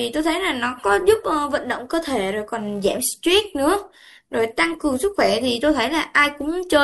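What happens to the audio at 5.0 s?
At 5.0 s the filter restarted on every block is still active, as it is across the whole clip. The filter discards its internal state at each block boundary and begins from silence, so every block opens with a small transient. These repeat at about 345 Hz, which fits a 128-sample block, and form a steady buzz under the speech that grows louder and softer with the speech level.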